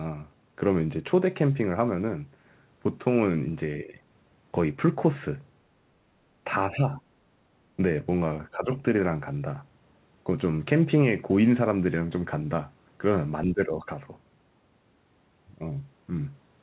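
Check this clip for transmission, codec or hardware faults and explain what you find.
One fault recurs: speech suppressed in double talk, at 3.84–3.98 s, 6.67–7.01 s, 8.51–8.81 s and 13.46–13.89 s. The speech level ducks by about 10 dB in the first, third and fourth events and by about 5 dB in the second, for a few tenths of a second each. It most likely comes from an echo canceller failing to separate the near-end speech from the far-end echo during simultaneous talk and attenuating the near-end speech along with it.

Unlike packet-loss dropouts, the speech is turned down by the echo canceller rather than lost in transit and replaced with clicks or synthetic filler. Unlike gain-control pumping, the dips are brief and isolated and do not follow the overall loudness. The audio is band-limited with nothing above 4 kHz, which fits a 64 kbps G.711 call path, and that limit holds across the whole clip rather than only during these dips.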